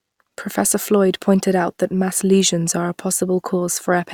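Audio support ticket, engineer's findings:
Listened through the whole speech clip and found nothing to flag, so no faults to log on this one.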